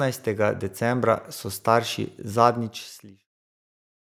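From 0.24 s to 4.05 s the level climbs steadily by about 6 dB, the sign of automatic gain rising: the gain control judged the input too quiet and kept turning itself up. Speech and the background noise floor swell together over several seconds, which separates it from a talker simply getting louder, where the noise would stay put. The smooth fade-out beginning near 2 s and ending at 3.29 s is a deliberate edit.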